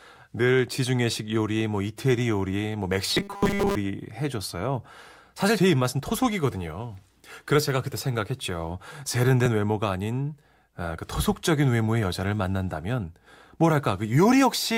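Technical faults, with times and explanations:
3.11–3.77 s, robotic sound from repeated short buffers: speech becomes a rigid metallic buzz near 200 Hz, likely from most audio being skipped while 5 ms buffers repeat.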